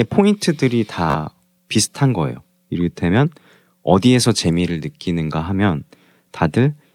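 At 1.10 s the speech breaks into a brief Bluetooth stutter lasting until 1.15 s. Audio packets failed to arrive in time. The receiver filled the gap by replaying its last short buffer over and over. That repetition produces a quick buzzy, machine-gun flutter. About 43.5 ms of audio is lost, which fits roughly three dropped packets. When playback resumes, the speech picks up further along. The missing slice is simply skipped.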